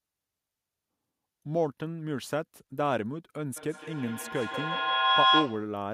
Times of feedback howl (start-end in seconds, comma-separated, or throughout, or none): 3.56-5.78